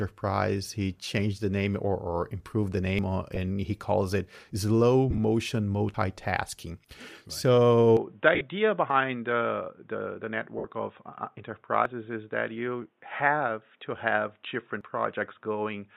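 At 2.99 s, right after "or or improved the", about 40 ms of speech skips out and the two sides butt together with no gap. This is audio missing between chunks, likely lost at a chunk boundary. It recurs every 3 s, at 5.94, 8.90, 11.86 and 14.81 s. That regular spacing and the clean splice separate it from a dropout.

At 3.35 to 3.37 s, just before "he calls it slow", the sound briefly turns to a noisy smear rather than skipping. These are lost LE Audio frames, where the decoder fills in with a scrambled copy of the last spectrum. The same smear returns at 5.10 to 5.19 s, right after "he calls it slow". There about 37.5 ms is lost in short bursts spread over 75 ms.

At 7.97 s the sound abruptly dulls to nothing above 3.8 kHz. The level drops about 5 dB, new noise sits about 45 dB below the signal, and there is no silence at the change. This input switched to a poorer device, likely another microphone or a headset profile. 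It persists to the end, unlike a momentary glitch.

Further smeared frame losses come at 8.35 to 8.41 s, mostly one run of about 50 ms, then at 10.58 to 10.65 s for 60 ms and at 13.16 to 13.20 s for 30 ms. Light lossy compression is also present.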